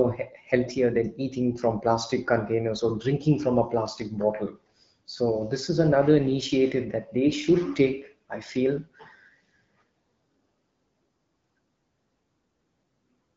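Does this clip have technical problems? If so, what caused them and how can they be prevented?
No, there are no technical problems to point to in this speech clip. It has the sound of an AMR wideband (HD Voice) call at 12.65 kbit/s, with the band-limited character of that codec and only light coding effects.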